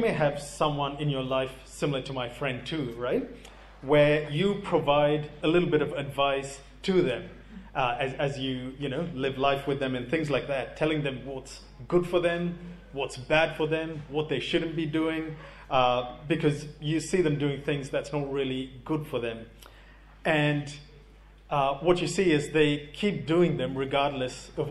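Throughout the clip, mains hum from power-line coupling, such as a ground loop, adds a steady 50 Hz tone sitting about 25 dB below the signal.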